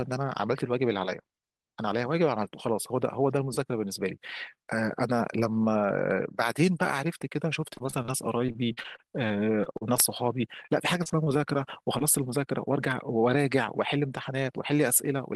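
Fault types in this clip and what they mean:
Repeated packet loss (robotic sound): three choppy stretches, from 7.61 to 8.10 s, 8.46 to 10.00 s and 10.66 to 11.39 s, with pieces of speech missing. Packets kept failing to arrive in time, six, ten and six holes respectively, each patched by extending the preceding sound before the next gap hit. The longest single hole is 39 ms, and the patching covers about 13 to 21 percent of each stretch.
Short concealed packet loss: a brief smear or wobble around 11.99 s, lasting only a few hundredths of a second. About 20 ms of audio never reached the decoder in time, so the receiver filled roughly 18 ms by carrying the last sound forward, voiced or noise-like as suited, and then blended back into the real signal.
Jitter buffer speed-up: from 13.96 to 14.57 s the speech runs slightly hurried, about 6 percent faster, while its pitch stays unchanged. The receiver had built up more buffered audio than it wanted, so it trimmed short pitch-period slices many times in a row to reduce the delay. 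Around 50 ms is removed in total, enough to tighten the rhythm of this short passage.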